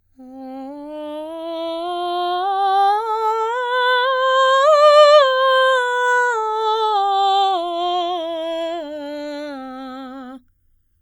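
Throughout the music, the channels are drifting apart. Their clocks disagree by about a hundred parts per million, so delay creeps to about 0.7 ms, sweeping comb notches like slow flanging.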